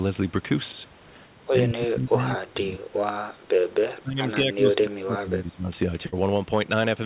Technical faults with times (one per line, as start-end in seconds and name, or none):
1.67-2.89 speech suppressed in double talk
4.01-5.69 speech suppressed in double talk
6.06-6.14 burst of packet loss